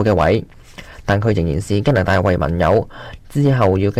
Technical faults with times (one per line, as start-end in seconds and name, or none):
0.00-3.99 hard clipping